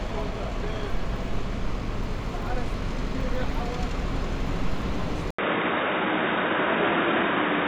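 Sounds here, and at 5.31 s there's an 80 ms gap, then everything above 3.8 kHz vanishes and a faint new noise floor appears, likely an input switched to a poorer device.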